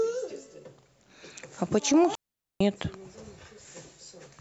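At 2.15 s the speech drops out completely and returns at 2.61 s. This is a digital wireless dropout. The radio link lost too much data for the receiver to rebuild the signal, so it muted its output. The gap lasts about 454 ms. The fade into it is very short, so it sounds like a clean cut. What remains is a hole of near silence. No hiss, crackle or noise burst comes before or after it.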